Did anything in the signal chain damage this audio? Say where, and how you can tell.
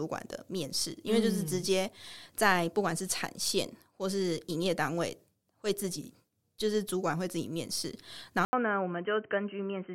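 Yes. An input switched to a poorer device at 8.45 s and stays that way to the end. There is a gap of about 80 ms, then the speech returns dull and boxy, with nothing above 3.1 kHz, roughly 5 dB quieter, and over a new noise floor some 45 dB down. This likely points to the capture stage, where the driver dropped to a different microphone or a headset's narrowband call profile, with a different response, gain and self-noise.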